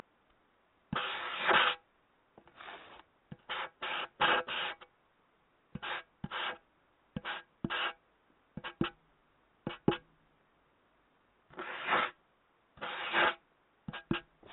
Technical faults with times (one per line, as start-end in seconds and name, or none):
none